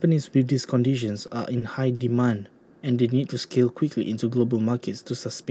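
Short stalls from late packets interrupt this speech clip at 1.27–1.31 s, 1.59–1.63 s and 1.95–2.01 s. Each time the jitter buffer ran dry, so the receiver held the last sound for 20 ms, 20 ms and then 40 ms until the packet arrived, leaving a brief drawn-out sound without losing audio.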